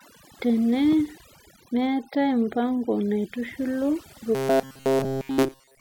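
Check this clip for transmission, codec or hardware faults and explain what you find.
Two faults are present.

Overdone noise removal runs through the whole clip. A noise reducer set far too aggressively switches off individual frequency bands near its noise estimate, taking quiet parts of the speech with them. The background drops and breaks up into twinkling specks.

Robotic sound from repeated short buffers starts at 4.35 s and lasts to the end. New audio is likely arriving too slowly, so playback keeps looping the last short stretch, which fits a buffer of about 7.5 ms, and all of that final section is repeats. The loop imposes a rigid 134 Hz metallic buzz that only loosely tracks the speech.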